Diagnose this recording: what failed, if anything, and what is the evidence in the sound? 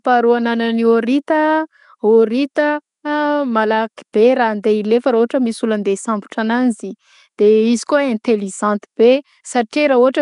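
Nellymoser-style compression runs throughout the recording, at the codec stage. The speech carries a rough, hissy halo and a smeared, underwater quality, with nothing above 10.6 kHz. That fits coarse fixed-rate block coding, likely Nellymoser Asao at around 44 kbps, where weak bands get no bits and are filled with noise.

Pre-echo occurs at 4.13 s, also at the codec stage. A brief hiss, about 12 ms long, leads into "be raha" and softens its onset. The codec spread quantisation noise across the whole block, so noise sized for the loud attack also filled the quiet moment before it.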